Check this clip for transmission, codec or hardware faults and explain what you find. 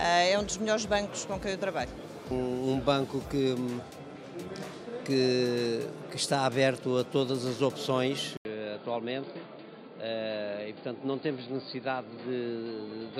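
One fault: from 8.37 s the sound turns dull and about 5 dB quieter after an 80 ms gap, with nothing above 4.8 kHz and a faint new hiss, likely the input switched to a poorer device.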